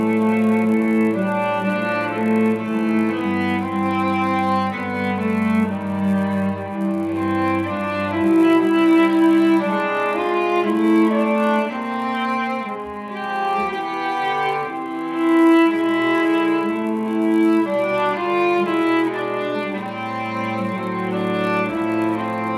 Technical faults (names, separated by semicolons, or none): resampler restarted on every block